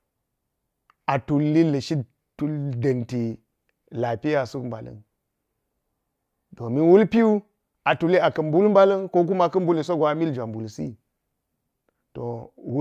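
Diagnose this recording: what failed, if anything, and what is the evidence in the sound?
Nothing in this speech recording points to a failure at any stage of the chain. No event in the sound calls for a diagnosis.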